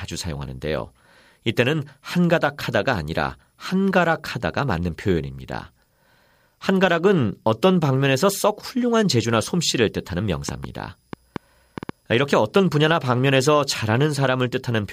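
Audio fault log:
7.66 s, dropped samples: one sharp click, likely from just a sample or so going missing, so the waveform jumps straight to a later value.
10.49 to 11.90 s, train of clicks: about seven uneven pops, roughly 4.3 a second, up to about 10 dB above the sound, likely interference.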